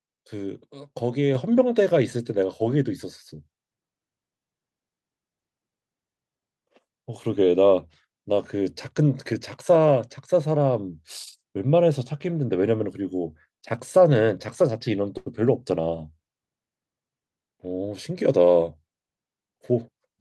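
At 1.35 s the microphone volume is stepped up by about 5 dB in a single jump. The call software judged the input too quiet and raised the device's capture level, so the talker and the room noise behind them rise together at the same instant. That shared, instantaneous rise sets it apart from a compressor or gradual gain ramp, which would ride the voice more smoothly and leave the background's jump less abrupt.

From 15.17 to 15.28 s there is a short stall from a late packet. The jitter buffer ran dry, so the receiver stretched the last bit of sound for about 88 ms until the packet turned up, then resumed exactly where it left off. The result is a held sustain with a slight buzz or dip rather than a gap. Unlike a packet-loss dropout, nothing is skipped, and the audio simply lands about 88 ms later than before.

From 17.22 to 18.11 s a jitter buffer speed-up plays the sound at about 110% of its normal rate. 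With more audio queued than it wanted, the receiver trimmed many tiny pitch-period slices in a row, roughly a tenth of a second in total, to win back delay. The passage sounds hurried, but the pitch stays where it was, which is what distinguishes it from a simple faster playback or resampling error that would raise the pitch.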